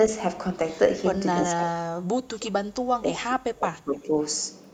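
From 1.59 to 4.12 s, the speech is pushed down hard. Its level sinks by roughly 35 dB at the deepest point. It dips and returns in stretches, adding up to about two seconds of weakened sound. This is speech suppressed in double talk. The likely cause is an echo canceller facing both sides talking at once. It could not tell the near talker from loudspeaker echo, so it attenuated everything.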